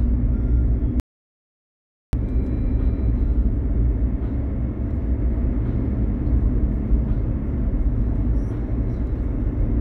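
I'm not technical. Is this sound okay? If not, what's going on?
No. Something between the source and the recorder likely stopped passing signal for a moment, perhaps a loose connection or an accidental mute, while the recording carried on capturing nothing. That is an audio dropout to silence. At 1.00 seconds the sound cuts off abruptly, and at 2.13 seconds it returns just as suddenly. For about 1.1 seconds there is total silence, not even faint background noise, and whatever happened in that stretch is lost.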